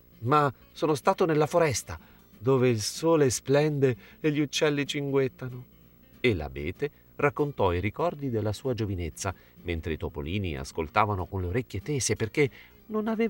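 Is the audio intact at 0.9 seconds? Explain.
No. At 0.9 seconds, as across the whole clip, a steady buzz at 59.94 Hz sits under the sound with a gritty hash above it, plus a thin whine near 15.7 kHz, all roughly 30 dB below the signal. This is video or display buzz: a screen or video cable is coupling into the audio path, so the picture's field rate comes through as the buzz and its line scanning as the high tone.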